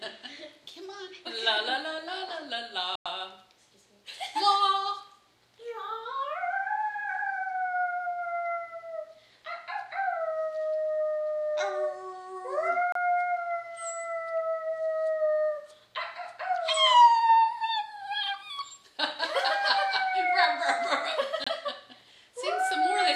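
Everyday sounds, briefly cutting to silence at 2.95–3.06, 12.92–12.95 and 21.44–21.47 s before resuming, likely a Bluetooth stall where the headphone buffer ran dry.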